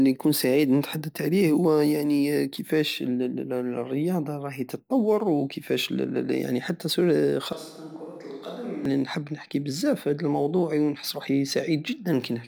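A speech clip with one fault. From 7.53 to 8.85 s the speech turns roomy and hollow, loses bass and drops about 10 dB. Room noise becomes audible, about 35 dB below the speech. This is a switch to a distant microphone, likely because the close one dropped out. The sound switches just before "نحب نحكي بزاف في".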